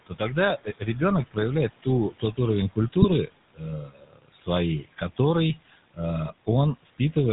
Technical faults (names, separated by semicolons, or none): noise suppressor artifacts; GSM full-rate codec; speech cut by the noise suppressor; GSM bit errors